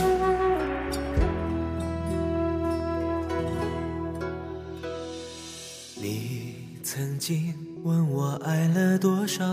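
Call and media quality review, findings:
Train of clicks, 0.02–3.29 s. Likely interference from nearby equipment or a struggling interface injecting repeated pulses into the path. Symptom: some twenty similar ticks at about 7 per second, unevenly spaced, peaking at roughly signal level, audible over the sound and in gaps.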